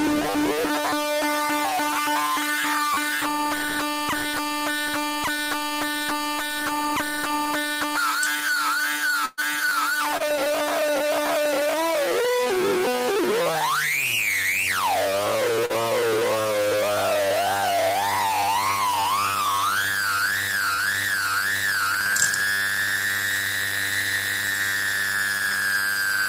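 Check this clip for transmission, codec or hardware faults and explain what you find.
Three kinds of network and playback fault appear.

Repeated buffer at 2.94–2.97, 9.69–9.71, 12.25, 22.10–22.13 and 25.52 s: late audio made the device replay the same roughly 10 ms buffer one to three extra times. This produces a hard-edged click or brief buzz rather than a smooth smear.

Burst of packet loss at 9.25–9.39 s: about 120 ms never arrived. The receiver stretched the last sound into a fading buzz or hiss, then resumed further on, and the skipped stretch is missing. It is much longer than the short concealed losses.

Short concealed packet loss at 10.17–10.22, 12.44–12.48, 15.66–15.71 and 20.73–20.80 s: 20 to 40 ms holes were filled by continuing the prior sound and blending back. These are heard as brief smears or wobbles, with no hard repeats.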